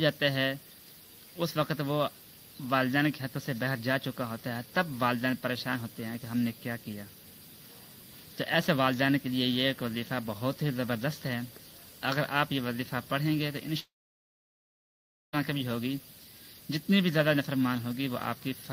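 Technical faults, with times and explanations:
13.79–15.35 s, long network dropout: the sound smears into a brief fading buzz, then about 1.4 s of silence before resuming further on with roughly 1.5 s lost, likely from a stalled stream. Unlike a short packet-loss glitch, concealment gives out completely.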